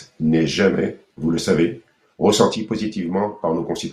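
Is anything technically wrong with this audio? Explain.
Yes. From 2.56 s to the end, the speech falls abruptly by about 6 dB, likely because one channel drops out before the mono sum. The waveform steps down sharply, and the spectrogram dims evenly across all frequencies.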